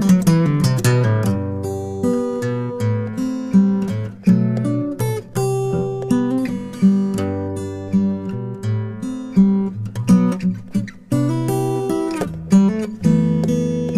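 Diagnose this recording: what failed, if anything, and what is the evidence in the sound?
No fault found in this recording.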